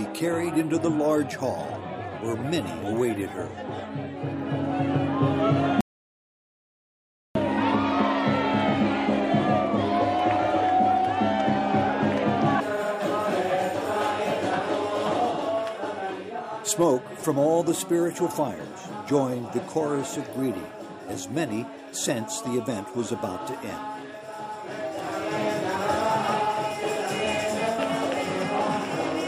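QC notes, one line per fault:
5.81–7.35 s, audio dropout to silence. The sound cuts off abruptly mid-flow at 5.81 s and returns just as abruptly at 7.35 s, leaving a gap of about 1.55 s. The gap is silent, with no room tone or background hiss underneath. That points to the input being lost rather than the source going quiet, likely a disconnected device, a failed link or a stray mute, while the recorder kept writing silence. Whatever occurred in that stretch is gone.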